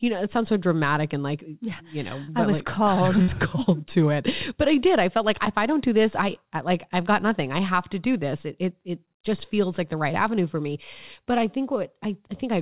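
A speech recording carried over a call path whose content stops sharply at 4 kHz, with the grainy coding noise that points to G.711 mu-law at 64 kbps. It has two packet-loss faults. From 2.24 to 2.30 s, just before "I was like", there is a short concealed packet loss. About 40 ms of audio never arrived in time, and the receiver covered 36 ms of it by extending the previous sound, which gives a brief smear before the real signal blends back in. On a spectrogram this shows as a thin slice where the harmonics run on unnaturally flat or turn into soft noise. In the waveform it is a short stretch of repeated cycles with a seam at the join. At 3.22 to 3.30 s, between "called I" and "called to it", a burst of packet loss removes about 60 ms, and 59 ms of it is filled by continuing the last sound and fading it. The result is a held buzz or hiss, after which the speech resumes with that stretch missing. 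On a spectrogram the harmonics freeze into horizontal lines that weaken towards the gap's end. In the waveform the amplitude tapers over periodic copies, then jumps to new material.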